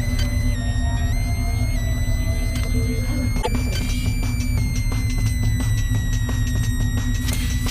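A switching supply whistle runs under the whole recording: a thin high tone wandering between about 1.8 and 2.4 kHz, centred near 2 kHz, sitting roughly 15 dB below the programme. Its pitch moves because the supply's burst-mode switching rate shifts with load. At 3.38 to 3.48 s there is damaged data in the compressed stream. The decoder misreads corrupted frames and hunts for the next valid header, so the sound briefly breaks up there.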